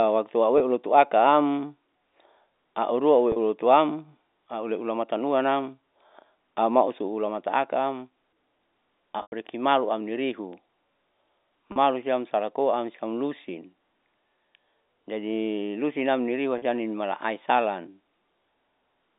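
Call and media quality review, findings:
Packet loss with pitch repetition, speech at 0.58, 3.32, 9.22, 11.72, 16.58 s. Gaps of 20, 40, 100, 40, 40 ms bridged by repeating last pitch period. Short ones: brief buzzy held tone; 9.22 s gap fades toward silence. Landmarks: before "siam salakoam siam lusin", between "jadi lusinam niriua" and "nimala aisalan". Probable component: network path, receiver concealment.

Bit error spike at 10.53 and 12.03 s, the second just before "siam salakoam siam lusin". Single sample each, value jumping by a power of two and back: one sharp broadband tick unrelated to the speech. Probable component: digital link or memory corruption.

G.711 A-law line path heard as band-limited, roughly 200 Hz to 3.7 kHz.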